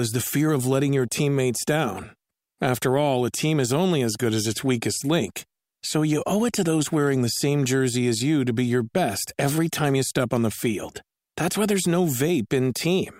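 A speech recording, and nothing technically wrong can be heard in it. There is no event to place in time and no cause to point to.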